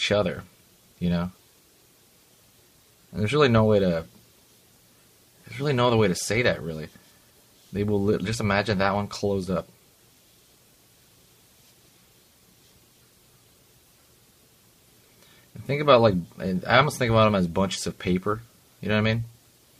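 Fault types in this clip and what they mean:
Nothing stood out on listening; no faults could be heard anywhere in the audio.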